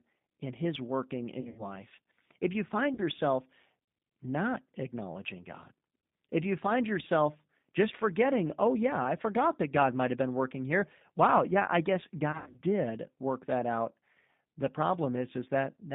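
Throughout, the speech sounds thin, slightly rough and synthetic, confined to a band of about 150 Hz to 3.7 kHz. This is the G.729 codec (the G.729A variant) at 8 kbit/s, which rebuilds speech from a vocal tract filter, a pitch predictor and a few pulses, so detail is plainly lost.

From 1.41 to 1.70 s, the sound smears into a fading buzzy tone or coloured noise. At 2.94 to 3.02 s, just after "you find", there is a briefer smear. From 12.32 to 12.60 s, between "yeah I guess" and "did work that out", the speech goes weak or distorted. Each is VoIP packet loss concealed by the speech codec: about 120 ms scattered over 160 ms, then 40 ms, then 160 ms over 240 ms, with runs up to 80 ms. The decoder extrapolates the last pitch and filter while lowering the gain.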